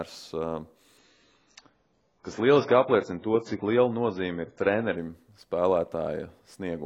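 At 0.98 s the speech drops abruptly to a lower-quality version of the stream, with no gap, and stays there until 4.98 s. This is an adaptive stream at a lower bitrate, where the player switched to a thinner encode, likely because the connection slowed. Nothing is left above 7.6 kHz, so sibilance dulls, air vanishes, and coding artefacts become audible. The quality jump points to a drop from around 96 kbit/s to 16 kbit/s AAC.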